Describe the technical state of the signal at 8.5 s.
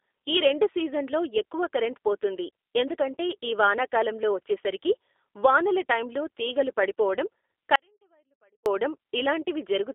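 At 8.5 s the sound is missing. An audio dropout to a faint residue runs from 7.76 to 8.66 s, right after "వానల టైమ్లో తీగలు పడిపోవడం". For about 0.9 s only a faint trace remains, about 40 dB below normal. It starts and stops abruptly. The likely cause is a lost signal while the path downstream stayed live.

Under this, G.729 codec damage is plainly audible throughout. Nothing passes above 3.8 kHz, and the band sits roughly between 300 Hz and 3.6 kHz. The sound is rough and synthetic, which fits an 8 kbit/s G.729A stream. That codec rebuilds each frame from a filter, pitch prediction and a few pulses.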